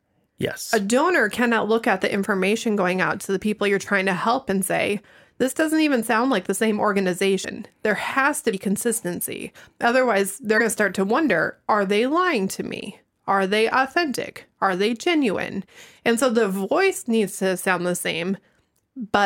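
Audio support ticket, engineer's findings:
Compressed frames skipped at 7.43 s, 8.52 s (just after "has to"), 9.55–9.58 s and 10.57–10.61 s. Speech jumps forward each time: about 50 ms, about 100 ms, about 150 ms, about 50 ms lost. Probable component: decoder or file. Whole frames missing or rejected as corrupt, so playback leaps by frame multiples.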